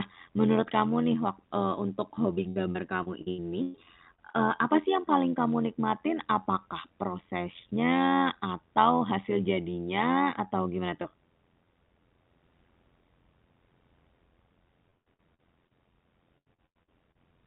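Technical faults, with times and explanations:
Throughout: overlap-add ripple. Windowed frames were rejoined with an overlap whose gains don't sum to a constant, so the level swings by about 11 dB once per frame, around 100 times a second, laying a metallic buzz with extra tones around the voice over the speech.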